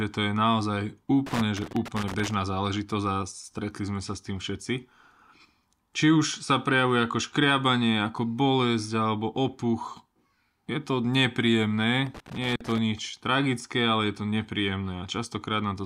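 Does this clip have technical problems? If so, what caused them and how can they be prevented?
Yes: loose connector crackle at 1.26–2.34 s (after "to je naozaj", before "záležitosť a") and 12.07–12.78 s. A worn contact intermittently breaks, chopping the speech; the waveform shows ragged gaps and spikes, the spectrogram broadband vertical streaks. Clean or replace the connector and secure the cable.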